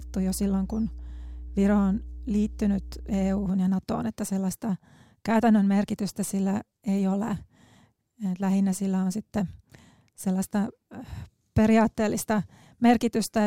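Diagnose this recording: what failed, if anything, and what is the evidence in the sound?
Mains hum in the analogue wiring: a steady 60 Hz tone runs from 0.0 to 3.49 s, roughly 15 dB below the speech. A ground loop or nearby transformer is coupling the power line in. Unlike broadband rumble, it holds one fixed pitch.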